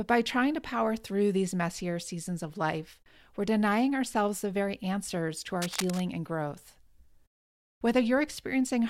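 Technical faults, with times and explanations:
5.62 to 6.00 s, cable scratch noise: a worn cable or connector was likely moved, so its contact resistance jumped around rapidly and fed dense, irregular bursts of noise into the signal. Just after "very answers to our" and before "and growth", a rough scratching rustle sits over the speech for about 0.4 s, only around 10 dB below it.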